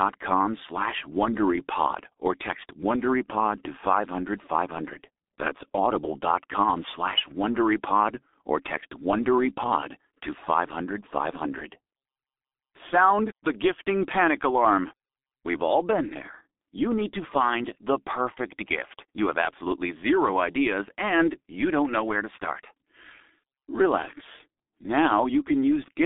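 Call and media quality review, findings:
Muffled, hoarse speech throughout, blurred consonants, nothing above 3.8 kHz, band roughly 250 Hz to 3.6 kHz. G.723.1 codec, heavy damage; 30 ms frames, slow voice model, fits a 6.3 kbit/s stream.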